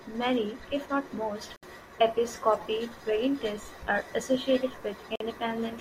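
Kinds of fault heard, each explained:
Gap at a join of encoded pieces: the speech was encoded in separate chunks and butted together without trimming, so each join keeps the encoder's leading silence plus the padding on the previous chunk's final frame. You hear it as a sudden dropout of about 65 ms at 1.56 s and about 48 ms at 5.16 s, with edges that the codec smears, before the speech picks up right where it left off.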